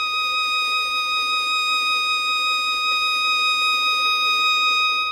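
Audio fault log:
Throughout: generation loss. The music sounds swirly and hollow, attacks blur, and nothing sits above 17 kHz. Likely about five AAC-LC passes near 96 kbit/s.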